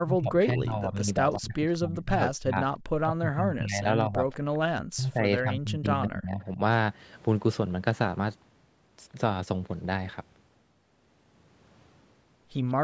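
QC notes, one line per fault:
0.05–2.6 s, 3.06–3.88 s, 4.04–4.25 s, 4.75–6.41 s: speech suppressed in double talk. The talker's level dips by about 15 to 35 dB in these spans, deepest in the last, likely because the echo canceller turned down near-end speech while both sides were talking.
1.31 s, 1.74 s, 4.32 s, 12.68 s: echo leak. Brief, faint scraps of a delayed copy arrive 193 ms after the original, about 30 to 40 dB below the speech, likely residual loudspeaker echo the far end's canceller failed to remove.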